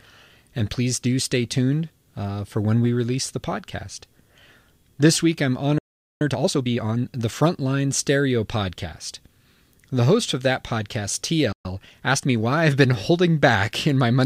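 Playback stall at 5.78 s: the sound cuts out for about 0.42 s until 6.21 s, likely because the player ran out of data or its thread was blocked.

Time-compressed catch-up from 6.21 to 7.05 s, right after "week I'm": the player trims its backlog by cutting and cross-fading small pieces, so speech runs 1.5 times faster at unchanged pitch.

Playback stall at 11.52 s, after "host of that podcast": the sound goes silent for about 0.12 s before resuming at 11.65 s.

Time-compressed catch-up from 11.65 to 12.47 s, leading into "I've been": the same cut-and-cross-fade shortening hurries the speech at 1.15 times speed without raising pitch.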